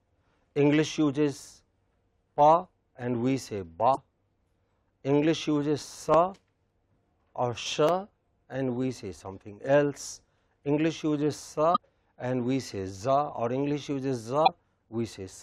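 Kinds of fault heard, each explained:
Damaged data in a compressed stream: corrupted bytes make the decoder misread frames and lose sync. This produces brief glitches of about 50 ms at 3.93, 11.73 and 14.44 s.
Dropped samples: a sharp click at 6.14 s and another at 7.89 s, likely from under a millisecond of samples going missing. The waveform steps abruptly from one value to a later one, and each click shows as a thin vertical spectrogram line.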